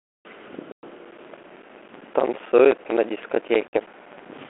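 Speech over a 32 kbit/s G.726 ADPCM telephone path, band-limited to roughly 300 Hz to 3.4 kHz with light codec grain, carries two faults. Packet loss on an ADPCM call opens hard-edged silent holes at 0.72 s (about 110 ms, around ten packets) and 3.68 s (about 50 ms, roughly five packets). After each hole the resynchronising predictor briefly brings back the speech slightly distorted. From 0.99 s to the end, a block size mismatch (padded) zero-fills every block. This produces a 15.6 Hz buzz and slows the speech to 0.861 times its speed with timbre unchanged, which fits a reader taking 1024-sample blocks from a shorter writer.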